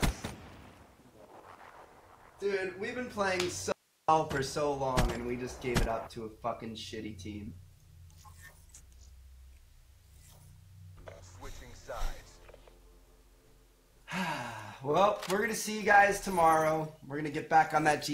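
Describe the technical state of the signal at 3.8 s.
At 3.8 s the signal is in an audio dropout to a faint residue, running from 3.72 to 4.08 s, about 0.36 s in all. The sound cuts off abruptly and returns just as abruptly, and the gap holds only hiss around 40 dB below the normal level. The likely cause is a break in the wanted signal while the downstream path stayed live. On a waveform it shows as a sudden near-flat stretch; a spectrogram shows a dim, broadband noise band with sharp vertical edges.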